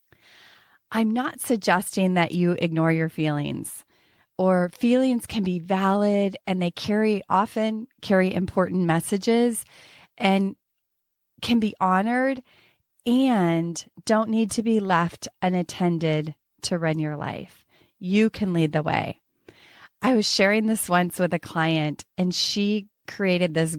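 No technical faults can be heard in this speech recording. There is nothing in the audio to point to or explain.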